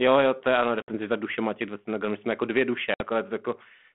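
Packet loss on an ADPCM call drops roughly three packets (60 ms) at 0.82 s, after "jo to je ano", and again at 2.94 s, after "jsme jako dvě duše". Each time the decoder's predictor and step size lose step with the sender's. The result is an abrupt silent hole, and then the speech comes back slightly distorted before it settles.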